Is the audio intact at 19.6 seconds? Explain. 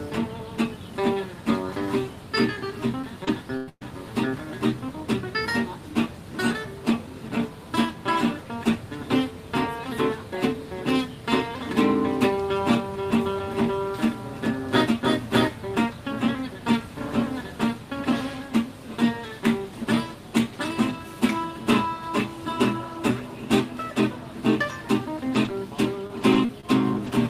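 Yes, the audio is intact at 19.6 seconds, with no dropout, click, distortion or other technical fault at that point.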